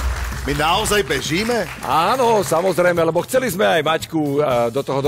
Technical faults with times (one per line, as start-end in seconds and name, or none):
3.19 dropped samples